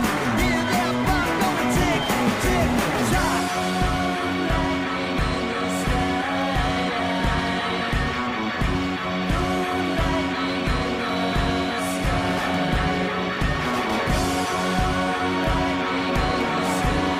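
Audio with two bit error spikes, single-sample ticks at 6.42 s and 15.44 s, reaching about -22 and -16 dBFS. Each is one flipped bit in memory or on a digital link, jumping the sample by a power of two, giving a broadband click unrelated to the signal.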